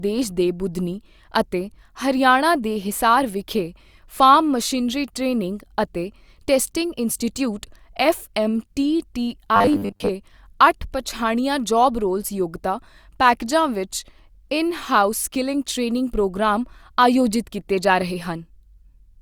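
From 9.56 to 10.09 s, audio likely arrived too seldom and a short buffer kept repeating: robotic sound from repeated short buffers, a rigid 100 Hz metallic buzz.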